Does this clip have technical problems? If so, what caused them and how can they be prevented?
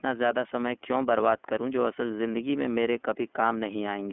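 Yes. Throughout the speech the sound is band-limited, thin and a little rough and synthetic, with plainly audible codec damage. This is the iLBC codec at work: it codes each 30 ms frame's excitation independently, which fits its 13.33 kbps mode, and keeps only roughly 250 Hz to 3.4 kHz. The call microphone processing's own cut of the lowest bass is irrelevant here. To prevent it, negotiate a wideband codec such as Opus or G.722 instead of iLBC.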